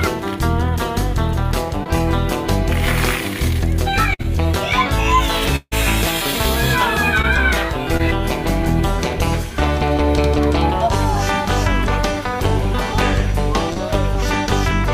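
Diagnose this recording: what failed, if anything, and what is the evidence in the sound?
Short concealed packet loss appears at 1.83–1.87 s, 7.22–7.25 s, 7.97–8.01 s and 13.73–13.78 s. This is a network fault. Each time, about 20 ms of audio failed to reach the decoder in time, and the receiver extended the preceding sound for roughly 16 to 28 ms before crossfading back into real audio. The patch is heard as a brief smear or wobble, and whatever fell inside that 20 ms window is gone.

A burst of packet loss at 4.14–4.21 s removes a larger piece, about 60 ms, which fits several consecutive packets lost or arriving too late for playout. Concealment held the last sound for about 54 ms and attenuated it across the gap, so the listener hears a short held, fading continuation. Playback then resumes further along the timeline, with the intervening audio missing.

At 5.56–5.74 s about 160 ms of audio never plays out, most likely because of a long network dropout. 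The receiver synthesised roughly 156 ms of continuation that decays as it goes, and toward the end of the gap about 40 ms is effectively silent. The sound then returns already further on, and the lost stretch is skipped rather than delayed.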